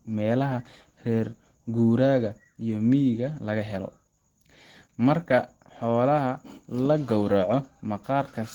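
Throughout the speech, Opus compression is plainly audible. The sound is hoarse and grainy, which fits the encoder's hybrid speech mode at a rate of about 16 kbps. Unlike MP3, it swirls less, and the band stays full up to 20.1 kHz.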